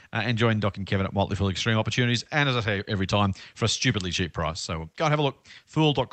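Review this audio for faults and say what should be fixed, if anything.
No faults; nothing to fix.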